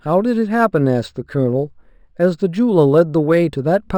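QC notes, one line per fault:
Throughout, imaging from linear upsampling. Straight-line interpolation left faint mirror images from 6 kHz to 12 kHz, about 40 dB down, giving sibilants a metallic shimmer.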